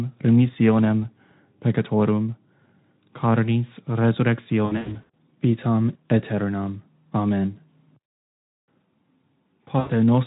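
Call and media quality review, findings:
VoIP packet loss concealed by the speech codec. Speech goes buzzy or noisy and smeared, fading, 4.65 to 5.14 s, gaps scattered over about 480 ms, longest about 80 ms, and again 9.79 to 9.91 s. Decoder extrapolating pitch and filter with decaying gain; Speex path at 15 kbps, light coding damage only.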